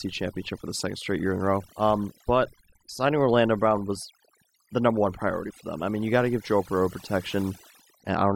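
From start to finish there's overdone noise removal: the denoiser was pushed too hard, so the background's near-silent with twinkly specks and quiet parts of the speech drop out with it.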